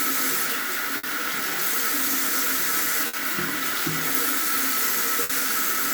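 Bursts of packet loss occur at 0.97–1.06 s, 3.07–3.16 s and 5.23–5.32 s. Each time the receiver extends the last sound for about 60 ms while fading it down, then resumes with roughly 60 ms of audio skipped, leaving a brief smeared jump.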